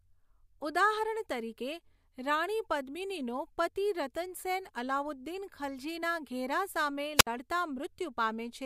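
A speech clip with a wireless microphone squelch dropout from 7.15 to 7.27 s, right after "અલાઉદ્દીન ખલજીના ઘેરા સામે": hiss swells as the radio signal fades, then the receiver mutes for about 62 ms. That rising static before the silent gap distinguishes it from a clean digital dropout.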